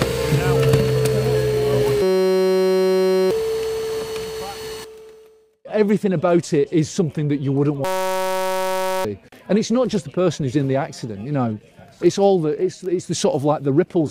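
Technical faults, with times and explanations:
2.02–3.31 s and 7.85–9.05 s, system hang loop: a frozen system replays one 5.33 ms slice, giving a steady 188 Hz buzz rather than a dropout's silence or a stutter. This fits a 256-sample buffer, and about 1.5 s and 1 s of audio are lost.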